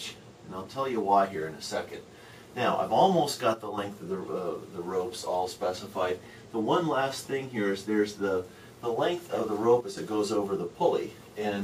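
One channel drops out from 3.54 to 3.78 s and again from 9.81 to 9.97 s. Each time the sound falls abruptly by about 6 dB, then snaps back. The likely cause is one stereo channel briefly going silent, halving shared content in the mono sum.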